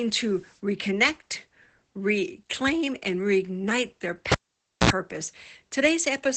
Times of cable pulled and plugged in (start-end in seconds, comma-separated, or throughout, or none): 4.32-4.90